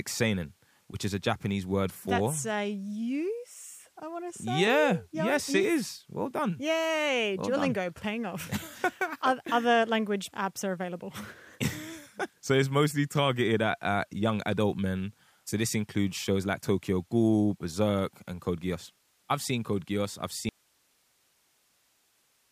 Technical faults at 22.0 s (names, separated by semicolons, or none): audio dropout to a faint residue